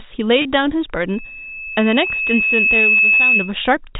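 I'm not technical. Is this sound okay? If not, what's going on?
No. At 0.42 s the speech briefly sticks on a slightly buzzy, held sound for about 30 ms. That is packet loss with pitch repetition: a small chunk of audio went missing, so the receiving end repeated the last bit of voice to cover the gap.

From 1.08 s to 3.56 s a high whistle at about 2.6 kHz swells over roughly two seconds until it is louder than the speech. This is loudspeaker feedback squeal: a microphone picked up its own loudspeaker, and that pitch kept looping round and growing.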